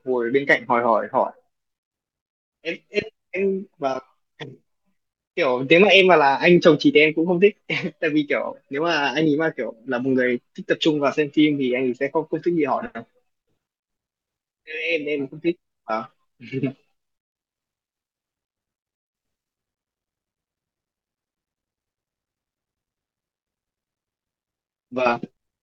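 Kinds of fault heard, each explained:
No faults turn up anywhere in this recording, so there's nothing here to name or explain.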